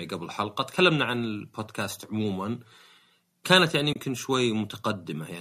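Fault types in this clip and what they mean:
AAC frame loss with muting: lost coded frames were zeroed by the decoder, leaving a soft-edged 30 ms gap at 3.93 s.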